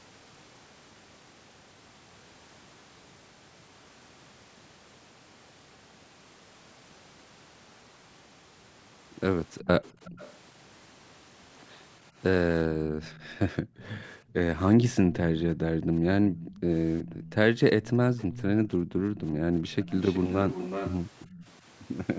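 Echo leak, from 9.6 to 10.33 s, 13.0 to 14.33 s, 15.13 to 15.6 s and 16.32 to 21.58 s: a copy of the speech trails it by about 0.37 s, around 20 to 25 dB down at first and rising to roughly 10 dB below the speech in the long final stretch. The likely cause is a loudspeaker on the far end whose echo canceller let part of its own playback back into the microphone.

Background gated by the echo canceller, at 12.68 to 13.0 s, 13.62 to 14.34 s, 15.01 to 15.91 s and 18.83 to 19.5 s: the room tone sinks by about 10, 27, 16 and 21 dB, then returns. Each dip comes as the canceller pulls the microphone down hard while the loudspeaker is playing.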